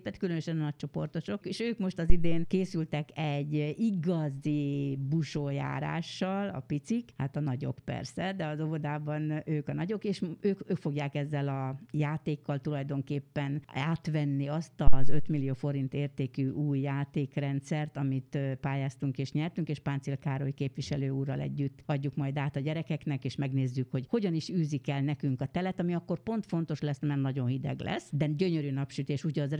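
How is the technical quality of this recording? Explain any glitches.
Two phantom power thumps mar the recording, at 2.10 to 2.59 s and again at 14.87 to 15.37 s. Each time, a supply switched on or off on a live input sent a sudden voltage step through the coupling capacitors. The audio then carries a deep, low-frequency thump peaking at about -8 dBFS and about -7 dBFS respectively, which dies away with a decay of around 112 ms and trails off over the following half second.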